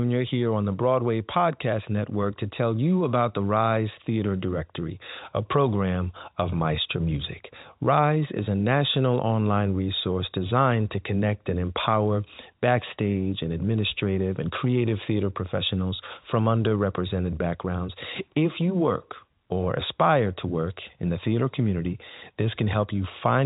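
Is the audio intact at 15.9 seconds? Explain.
Yes, the audio is intact at 15.9 seconds, with the speech passing cleanly through its G.711 telephone coding, which holds everything below about 3.8 kHz.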